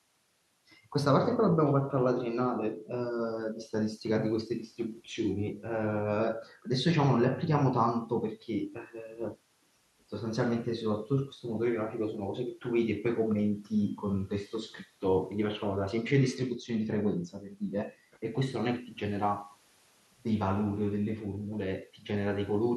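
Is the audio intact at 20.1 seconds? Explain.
Yes, the speech is intact at 20.1 seconds, with no audible dropout, glitch or other fault at that moment.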